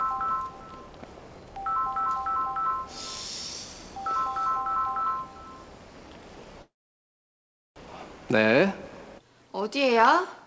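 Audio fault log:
6.62–7.78 s, call audio freeze: a brief fading tail, then about 1.07 s of silence, after which the sound resumes exactly where it stopped. Nothing is lost, but 1.14 s is added. The jitter buffer likely ran empty while packets were held up.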